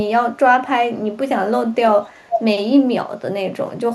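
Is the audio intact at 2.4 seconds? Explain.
No. From 2.06 to 2.43 s there is an echo leak: a delayed copy of the speech arrives about 487 ms behind the original and only slightly quieter, roughly 5 dB down, so it overlaps the speech. The likely cause is a far end playing the call on a loudspeaker, where the echo canceller failed to fully remove the microphone's pickup of that playback and returned the residue.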